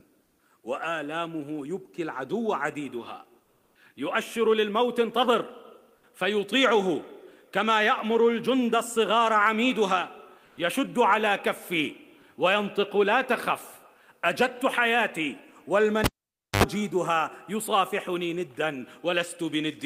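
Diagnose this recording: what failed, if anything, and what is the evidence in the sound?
Comfort noise in place of the background, at the codec and call-processing stage: at 0.23–0.39, 3.43–3.75 and 10.45–10.57 s the background becomes smoother synthetic noise at level changes of no more than about 1 dB. This is likely Opus discontinuous transmission. On a spectrogram, textured background gives way to flat, even noise bands.

Sound dropped by the voice detector, also codec-side: at 12.21–12.23 s a 20 ms stretch is replaced by steady noise, losing about 10 ms of sound. The likely cause is the Opus detector misjudging that moment as background. The waveform shows a brief notch of uniform fill.

Cable pulled and plugged in, an analogue wiring fault: a pop at 16.04 s, about 0.54 s of near silence including a 75 ms burst of 50 Hz mains buzz, then a second pop at 16.64 s. Spectrograms show vertical broadband streaks at each pop, with a low 50 Hz line and harmonics between.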